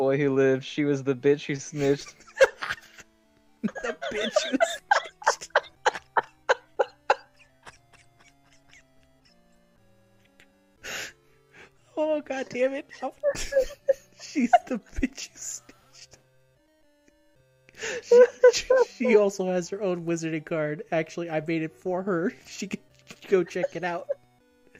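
Nothing in the audio jumps out as a technical fault; it simply runs along without any glitch worth pointing to.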